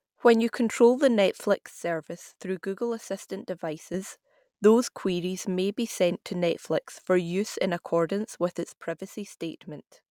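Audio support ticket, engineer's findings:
Level drops abruptly by about 6 dB at 1.54–3.94 s (after "you control the") and 8.69 s to end (after "use in accordance with"). Likely one channel dropping out before mono sum. Waveform shows step-down envelope; spectrogram uniformly dimmer, no spectral change.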